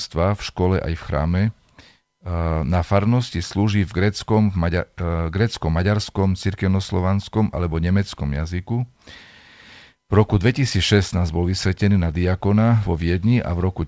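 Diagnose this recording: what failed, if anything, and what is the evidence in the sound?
Nothing failed here: the speech came through a call link whose top end stops at 8 kHz, which fits a wideband codec like G.722 running at 64 kbps, and that's exactly how such a link is meant to sound.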